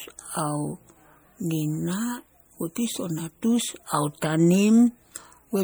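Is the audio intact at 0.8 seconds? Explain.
No. At 0.8 seconds the speech has a watery, swirly texture that runs through the whole clip. This is likely MP3 compression, at a bitrate that sounds near 64 kbps. Starved of bits, the encoder drops weak frequency detail frame by frame.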